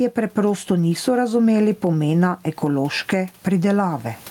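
All the way through this speech clip there's gain pumping: the gain ducks by something like 15 dB under each loud syllable, with the room noise sitting about 40 dB below the speech. Likely the gain was set far too hot and a fast limiter kept clamping down.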